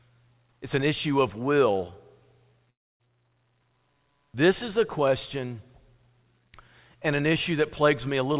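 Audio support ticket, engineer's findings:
2.70–3.01 s: sound decays into fading buzz, then silence, resuming with roughly 300 ms gone. Likely long network dropout; concealment ran out, unlike brief packet loss, which concealment usually bridges.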